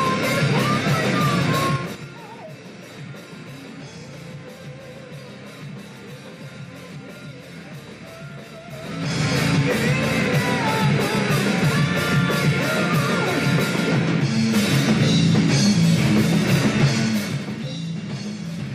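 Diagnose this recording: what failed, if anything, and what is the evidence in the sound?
Zipper noise in the level processing: unsmoothed gain steps tick at about ten per second, 1.67–2.04 s (4 dB steps, dropping about 20 dB) and 8.64–9.29 s (3 dB steps, rising about 20 dB).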